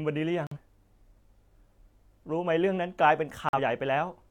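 At 0.47 s and again at 3.49 s, corrupt frame muted: damaged compressed frames were rejected and replaced with silence, leaving abrupt holes of about 0.11 s. Unlike a buffer dropout, timing stays intact, and unlike concealment, nothing is smeared over the gaps.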